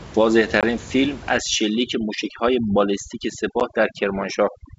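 A short speech recording over a wideband G.722 telephone link shows two kinds of fault. Packet loss on an ADPCM call hits first at 0.61 to 0.65 s, about 20 ms of lost audio, likely a couple of packets, and again at 3.6 s, a 10 ms hole consistent with a single packet. Unlike a plain dropout, the damage outlasts the gap. Each hole has hard edges, and the speech then returns slightly distorted for a few tens of milliseconds. That happens because the ADPCM decoder's adaptive predictor and step size lost track of the sender's state and have to re-converge. Overdone noise removal runs from 1.37 s to the end. A noise suppressor set too aggressively cuts individual frequency bands deeply whenever they sit near its noise estimate, taking quiet parts of the voice with them. The room noise, about 17 dB below the speech, drops and breaks up into twinkling specks. That pattern of fluttering, band-by-band gating sets it apart from the steady, faint upper-band hiss of G.722 itself.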